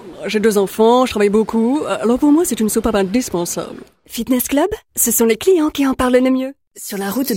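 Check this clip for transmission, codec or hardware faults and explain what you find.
Nothing found: no faults in transmission, coding or hardware are audible anywhere in the clip.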